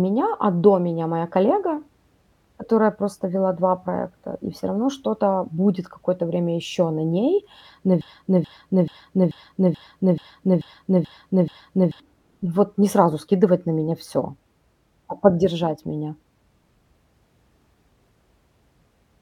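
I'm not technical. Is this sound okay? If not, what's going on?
No. The player or stream likely stalled and kept resending the last scrap it held. This broken-record loop follows "время еще на ней": a 0.43-second piece repeats nine times from 8.01 to 12.0 s, and the speech meant for that span, up to "вот не сразу скидывать", is lost.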